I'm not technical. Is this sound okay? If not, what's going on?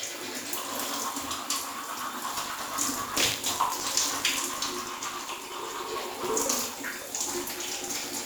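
No. From 2.3 s to the end, a steady robotic buzz, about 50 times a second, rides on the sound. This is buffer tearing: playback slipped out of step, so each short chunk contains a tiny sliver of audio from moments earlier, with hard joins.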